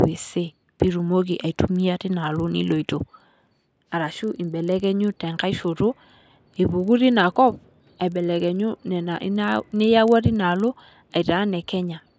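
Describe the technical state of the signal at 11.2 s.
At 11.2 s the speech carries a 25 Hz tick pattern, a buzz heard only while signal is present. It runs through the whole clip and comes from a resampler restarted on every block: each 40 ms block was converted independently, likely from 24 kHz down to 16 kHz, leaving an error at every block boundary.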